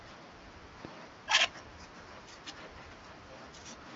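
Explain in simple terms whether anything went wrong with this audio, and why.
Yes, one thing went wrong. At about 0.85 to 0.87 seconds there is a single loud pop, a sharp click much louder than the speech. A sudden electrical jolt, likely from a plug, switch or static, got added on top. The speech carries on underneath it.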